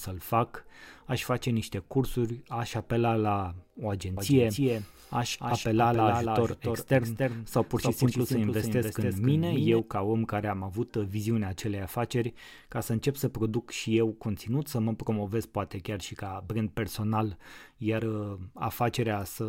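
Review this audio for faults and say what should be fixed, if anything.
From 4.17 s to 9.79 s the speech is doubled: a second full-band copy trails the original by roughly 300 ms at about 5 dB lower, then stops abruptly. This doubled audio track most likely comes from the same signal being captured twice, once through a slower path. Unlike room echo or reverb, the copy has no decay tail, no room colour, and no repeated fading reflections. To prevent it, route each source through only one capture path and mute any monitoring or loopback feed into the recording.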